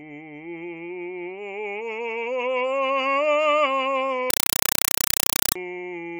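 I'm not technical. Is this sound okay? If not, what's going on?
No. From 4.30 to 5.56 s the music is replaced by loud, chattering static, a compressed stream played as audio. The equipment passed along undecoded data, which fits a Dolby Digital stream, as ordinary sound, so you hear short noise bursts about 31 times a second.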